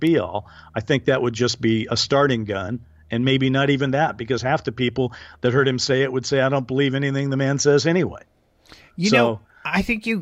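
The speech recording shows no technical faults anywhere in its duration.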